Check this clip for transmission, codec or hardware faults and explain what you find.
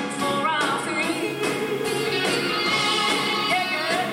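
One fault is present: low bit depth without dither, from 1.13 s to the end. Quiet sounds turn grainy and gritty, with distortion that tracks the signal. The likely cause is rounding to very few levels without dither, which fits about 6 bits, putting the error only around 25 dB below the signal.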